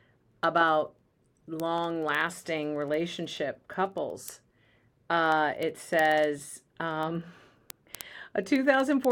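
From 0.13 s to 9.11 s, word clock ticks run through the speech. The receiving clock drifts roughly 300 ppm from the sender's, so one sample slips about every 70 ms. These slips cause sharp, regular clicks, which appear as evenly spaced thin vertical lines on a spectrogram.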